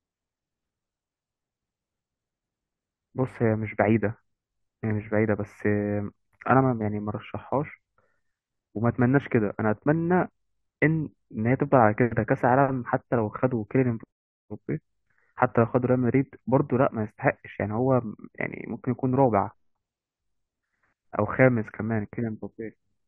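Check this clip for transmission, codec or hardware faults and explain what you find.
One fault shows up in this speech clip. From 17.79 to 19.84 s there is channel delay (comb filtering). One channel runs about two samples behind the other, roughly 0.05 ms. Summed to mono, the shared sound cancels in notches, the first near 10 kHz. The speech turns dull at the top.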